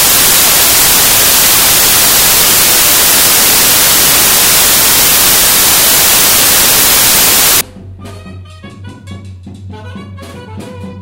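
Samples built from the wrong bytes run from 0.0 to 7.61 s: each sample's bytes are combined in the wrong order or alignment, so the rapidly changing low bits dominate every value. The result is loud, harsh broadband noise, close to white on loud sounds.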